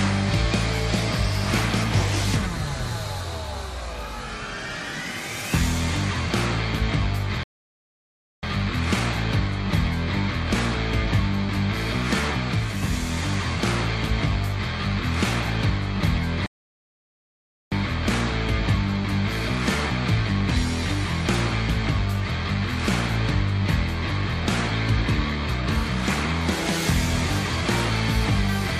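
Two rebuffering stalls interrupt the audio, at 7.43 s and 16.46 s, adding about 1.0 s and 1.25 s of silence. The player starved for data, then resumed exactly where it stopped. Waveform and spectrogram show clean, fully empty gaps with no missing material on either side.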